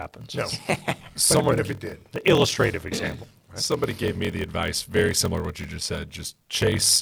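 A block size mismatch (padded) runs through the whole speech clip: one stage hands over shorter blocks than the next stage reads, and the shortfall in each block is filled with silence. The result is a buzz at about 41.7 Hz, the block rate, with a tiny gap cut into every block. The speech plays at 0.889 times normal speed but keeps roughly its usual pitch. This fits 1024-sample blocks being read as 1152-sample blocks.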